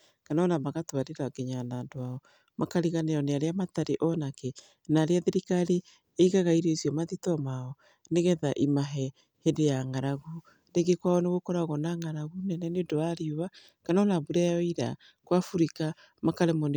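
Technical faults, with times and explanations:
No technical faults detected.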